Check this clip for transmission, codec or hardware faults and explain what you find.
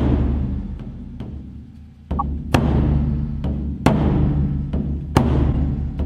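Two bursts of corrupt frames decoded, at 2.19 to 2.22 s and 5.52 to 5.54 s: damaged bits played as loud misplaced bursts near -10 dBFS. Unlike unconcealed packet loss, these insert wrong energy rather than silence.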